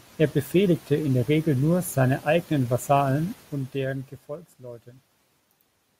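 From 3.24 to 4.44 s, just after "nur seine eigenen", the gain drops in unsmoothed 1 dB steps at around ten per second, lowering the speech by roughly 15 dB. Each abrupt jump clicks, so zipper noise ticks over the voice throughout the fade.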